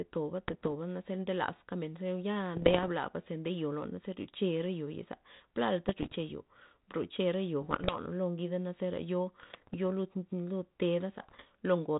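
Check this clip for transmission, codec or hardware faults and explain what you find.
The speech clip has one recurring transmission fault. It rides on a narrowband ADPCM link whose band stops near 4 kHz and whose light coding texture fits 32 kbit/s G.726.

Bit errors on an ADPCM link appear in six bursts: 0.48–0.68 s, 2.56–2.89 s, 5.88–6.16 s, 7.61–7.99 s, 9.40–9.75 s and 11.20–11.45 s. Roughly 0.7 to 1 percent of bits are flipped. Each flip throws off the decoder's step size and prediction, so the error keeps ringing for a few milliseconds. Each burst is heard as pops, gritty roughness and short jumps in level.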